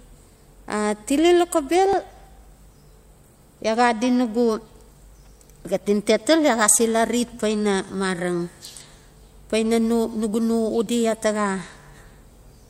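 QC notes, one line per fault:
1.93 s, 7.89 s, 10.87 s: audio missing between chunks. Each point is a brief skip of about 20 ms where the speech jumps forward with no gap. The spacing falls on a 3-second grid, so the likely cause is material dropped at chunk boundaries.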